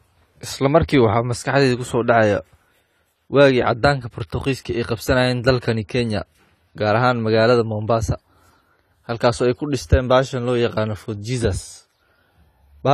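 The speech was most likely encoded with AAC-LC at a low bitrate, and the damage runs from start to finish. Short of bits, the encoder discards the top of the spectrum, so nothing is heard above 14 kHz, and it coarsely quantises what remains. The result is plainly audible: a dull, smeared tone with a watery, warbling texture on sustained sounds and fizzy sibilants. That degree of damage fits a bitrate around 32 kbps.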